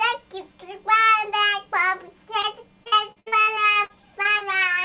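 At 2.42 to 2.46 s, a short concealed packet loss: about 20 ms of audio arrived too late and was bridged by extending the preceding sound, leaving a brief smear. From 2.84 to 4.43 s, repeated packet loss (robotic sound): about a dozen dropouts, the longest 62 ms, are each patched by continuation. Roughly a quarter of the stretch is synthesized, so the sound turns choppy. Through both faults the audio stays narrowband with nothing above 4 kHz, which fits a G.711 mu-law call path.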